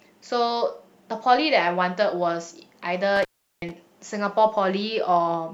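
Intermittent contact from 3.16 to 3.71 s in this speech recording: a loose plug or cable connection momentarily breaks, so the signal drops out for about 0.37 s, with crackle where the contact opens and recloses and faint hiss left during the gap.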